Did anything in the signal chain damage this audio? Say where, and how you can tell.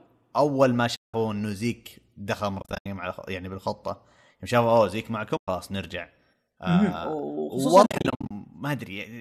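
Yes. At the network-to-decoder stage, AAC frames went missing and the decoder zeroed them, an AAC frame loss with muting. Soft-edged holes fall at 0.96–1.14 s, 2.60–2.86 s, 5.37–5.48 s and 7.83–8.31 s. The second and fourth are clusters of short gaps, the longest around 70 ms. The overlapping windows fade out and back in, and gaps in roughly 10 ms steps point to short frames, likely from low-delay AAC.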